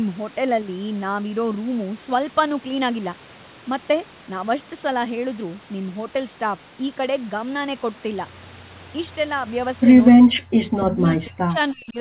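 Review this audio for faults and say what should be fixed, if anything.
From 9.15 to 9.47 s, one channel drops out. The speech falls abruptly by about 6 dB. A lost stereo channel before the mono sum is the likely cause. Check the input cabling and channel routing so both channels stay live.

From 10.17 to 11.97 s, the speech is suppressed in double talk. It dips and gaps, sometimes very deeply, for about a second and a half in total. An echo canceller likely confused this talker with loudspeaker echo. Better acoustic isolation or headphones would keep the canceller from ducking the talker during double talk.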